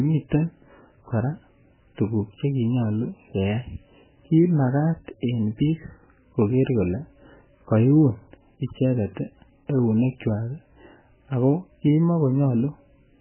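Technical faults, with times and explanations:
Throughout: MP3 compression, heavy. Nothing is present above 3.1 kHz, which fits a very low bitrate around 8 kbps. The encoder, likely MP3, dropped the treble and zeroed weak frequency lines that flicker between frames, giving the speech a watery, swirling quality with smeared onsets.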